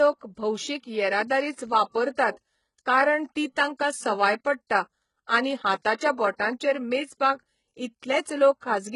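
All the way through, the treble sounds rebuilt rather than real, gritty and lispy on the s sounds, with nothing above 11.1 kHz. That's likely HE-AAC compression at a very low bitrate, around 12 kbps.

Right after "तांकां सवाय पडटा आनी", there's pre-echo at 5.83 to 5.85 s and again at 5.97 to 6.00 s. Codec noise smears about 22 and 28 ms ahead of the attacks as a short hiss, softening them.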